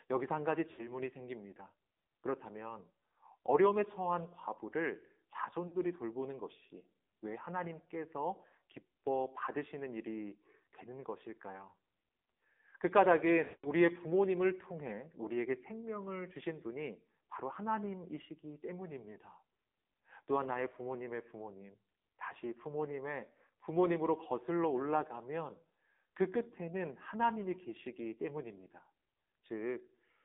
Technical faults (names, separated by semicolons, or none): AMR narrowband mobile codec; lost AMR speech frames